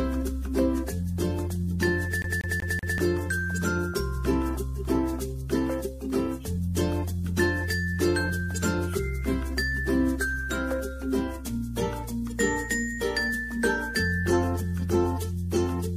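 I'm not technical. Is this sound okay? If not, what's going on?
No. Between 2.22 and 2.98 s, the audio is a CD stuck on one turn: a scratch keeps throwing the laser back one track, so the same 0.19 s slice plays four times in a row, with a tiny gap at each jump, a quick, even stutter.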